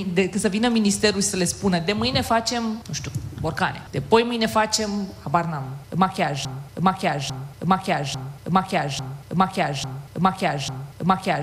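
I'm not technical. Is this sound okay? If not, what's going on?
No. From 6.45 s to the end, the sound gets stuck in a broken-record loop: a piece about 0.85 s long plays six times back to back, exactly the same each time, until the clip stops. This is likely the player, encoder or stream stalling and resending the last piece it held. Whatever should have been heard in those final seconds never arrives, so that part of the recording is missing.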